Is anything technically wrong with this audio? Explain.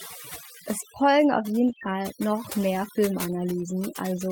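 Yes, the speech has four kinds of technical fault.

Overdone noise removal runs through the whole clip. A noise reducer set too aggressively pulls individual frequency bands far down, or shuts them off entirely, whenever they sit close to its noise estimate. The background drops to near silence with scattered twinkling specks. The quieter parts of the voice get removed along with the noise.

A lost packet rebuilt from error correction occurs twice: at 1.67 to 1.73 s, right after "es folgen auf", and again at 1.83 to 1.89 s. Each time, about 40 ms of audio failed to arrive. That is consistent with two missing packets, each filled from the low-bitrate backup copy carried in the following packet. Nothing drops out, but those stretches sound rougher and noisier.

Short concealed packet loss sits between those two repairs, at 1.75 to 1.79 s and 1.79 to 1.83 s. Each hole is about 20 ms, and the receiver filled roughly 14 ms and then 20 ms of it by extending the preceding sound, using its pitch if voiced or shaped noise if not, before blending back into the real audio. 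The result is a brief smeared, wobbling patch in which a short sound can disappear.

A filter restarted on every block affects the audio from 2.43 s to the end. The filter loses its internal state at each block boundary and starts again from silence, so every block opens with a small transient. These ticks repeat at 46.9 Hz, which fits a 1024-sample block at 48 kHz. They merge into a low buzz that rises and falls with the level of the speech.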